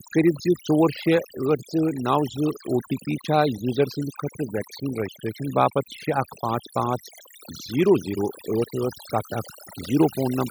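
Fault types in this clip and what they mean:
Overdone noise removal: heavy noise reduction across the whole clip clamps down any band close to the noise floor, taking quiet speech detail too. A spectrogram shows a blank background dotted with isolated bright specks and patchy, broken harmonics.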